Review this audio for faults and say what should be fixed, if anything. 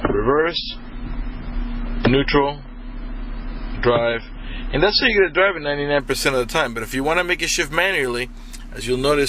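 From 0.0 to 6.0 s, an adaptive stream starting at a low bitrate: nothing above 5.6 kHz, fitting 16 kbit/s MP3, then a sudden gapless jump fitting 128 kbit/s. A spectrogram shows the upper band empty until 6.0 s. To prevent it, capture only after the player has settled on its top rendition, or fetch the file directly at full bitrate.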